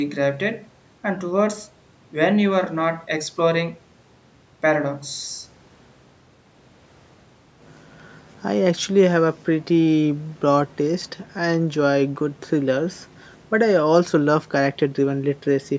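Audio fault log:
No faults in the audio fault log.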